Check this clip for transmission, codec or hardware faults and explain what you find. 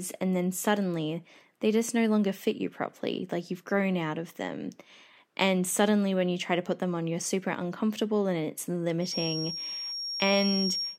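One fault is present, a feedback whistle in the last two seconds. It begins at 8.99 s, just after "super uncomfortable and it's", and runs to the end. A thin, steady tone near 5.6 kHz sits a little below the speech, swelling and fading slowly in level. The likely cause is a loudspeaker feeding back into the microphone with the loop gain right at the edge of feedback. One high frequency keeps ringing without building into a howl.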